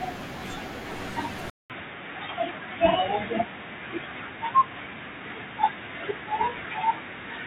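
At 1.50 s the speech drops out for about 200 ms, then returns narrower and duller for the rest of the clip, a little quieter and with a faint new background hiss well beneath it. This points to an input switched to a poorer device, likely a different microphone or headset taking over. On a spectrogram, energy above 3.8 kHz vanishes abruptly after a brief blank gap; the waveform shows that gap and slightly lower peaks afterwards.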